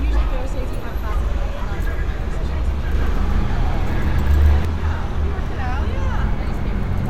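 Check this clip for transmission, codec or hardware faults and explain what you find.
One fault is audible: a doubled audio track. From 2.95 to 4.65 s, a second full-band copy trails the sound by around 150 ms at about the same level. It starts and stops abruptly and has no decay or room colour. A slower capture path likely recorded it twice.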